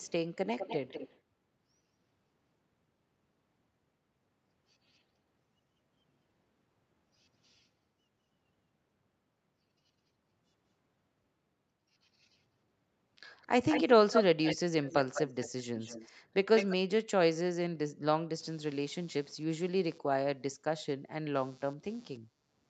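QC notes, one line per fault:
0.00–0.12 s, 0.57–1.19 s, 13.37–16.12 s and 16.55–16.76 s, echo leak: a delayed second copy of the speech trails the original by about 0.2 s (roughly 0.22 s at the start, closer to 0.2 s later). It is barely audible at first, around 10 dB below the speech at 0.57 s, and nearly as loud as the speech from 13.37 s onward. The likely cause is a far end on a loudspeaker whose echo canceller let part of the returned signal through.
18.40 s to the end, computer activity noise: a faint buzz pulsing at roughly 150 Hz sits about 35 dB below the signal. It does not follow the sound's rhythm, so it rises and falls with something other than the audio. This fits processor, graphics or mouse load shifting the shared ground of the audio circuit and injecting switching hum into the capture.
22.36–22.45 s, background gated by the echo canceller: the room sound briefly ducks, by about 7 dB at its deepest, over roughly 50 ms of affected time, and then recovers. 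The echo canceller clamped down on the microphone while the loudspeaker was active, which pulled the background level down with it. The room sound came back as soon as the canceller released.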